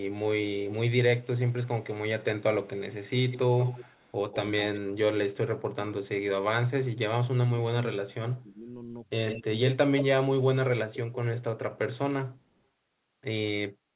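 From 0.0 to 4.8 s the speech carries an echo leak: a faint copy trails the talker by 224 ms, about 15 dB down, likely from a loudspeaker-side echo canceller letting residue through. On a spectrogram each syllable's harmonic pattern reappears as a weaker, shifted ghost. Like everything here, it stops at 4 kHz, matching the G.711 mu-law path.

Between 4.5 and 6.24 s comes speech suppressed in double talk, likely the canceller ducking everything while both sides spoke. For roughly 0.7 s in total the voice drops in chunks, by as much as 30 dB, cutting out in pieces. The waveform shows abrupt notches in the envelope, and the spectrogram shows gaps that cut across all frequencies.

The same suppression returns from 7.48 to 10.93 s, covering about 1 s in all with dips of up to about 25 dB. From 8.37 to 11.98 s a second echo leak overlaps it. This copy sits only about 5 dB below the speech at a 163 ms delay, so it sounds close to a doubled voice. 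The repeated energy is clearly visible as offset, nearly equal-strength smears on the spectrogram.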